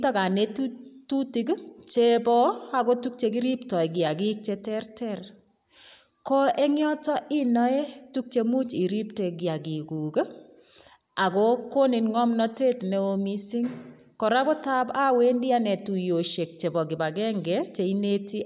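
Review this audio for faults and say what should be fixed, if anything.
Nothing stood out on listening to this speech recording, so there is nothing here that needs fixing.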